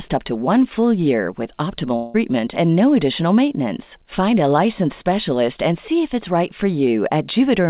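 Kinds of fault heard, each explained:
Long network dropout: from 1.96 to 2.16 s the audio stops progressing and the last sound is stretched into a fading buzz for about 0.18 s, with no stretch of full silence. The sound then resumes with that segment missing, consistent with a burst of packets that never arrived and were concealed by the receiver, the likely cause. The band-limit to 4 kHz, which points to a G.711 A-law call path, is heard throughout.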